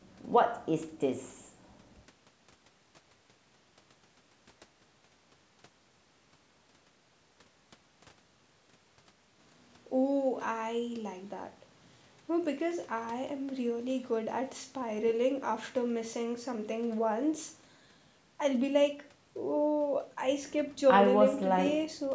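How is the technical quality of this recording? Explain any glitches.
No glitches turn up anywhere in this speech recording; it has simply been through a call's microphone processing, so there's nothing above about 8 kHz and the very lowest bass is trimmed off, just as you'd expect.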